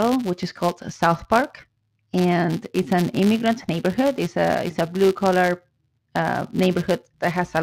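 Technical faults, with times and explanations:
Throughout: filter restarted on every block. The filter drops its memory at each block boundary and starts again from silence, so every block opens with a tiny transient. These repeat 172 times a second, which fits a 256-sample block. They form a steady buzz under the speech that grows and fades with its loudness. A spectrogram shows evenly spaced lines 172 Hz apart during speech. The waveform shows small regular spikes at each block start.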